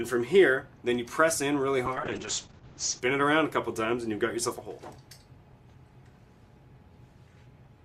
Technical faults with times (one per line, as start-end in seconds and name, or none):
1.87-3.07 call bitrate drop